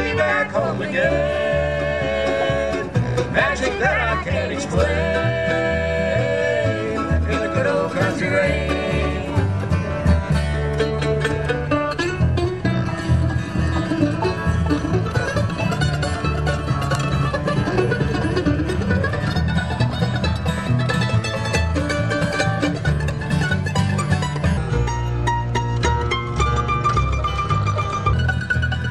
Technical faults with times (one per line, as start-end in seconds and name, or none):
24.57-28.13 section at the wrong speed